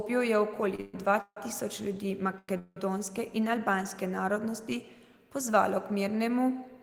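At 0.75 to 0.80 s, just before "dva tisoč ljudi", a late packet emptied the jitter buffer. The resulting short stall holds the last sound about 30 ms too long, and nothing is lost. Straight after, from 0.80 to 0.96 s, a call audio freeze, likely from packets held up in transit, stretches the speech into a 131 ms fading buzz or hiss. Another freeze from 1.22 to 1.38 s, likely the same delay, fades into 60 ms of silence. After "dva tisoč ljudi", a second short stall at 2.38 to 2.50 s drags a sound out for about 99 ms. A final freeze from 2.58 to 2.78 s, likely delayed packets again, fills 180 ms with a decaying buzz or hiss that ends in 20 ms of silence before speech resumes with nothing missing.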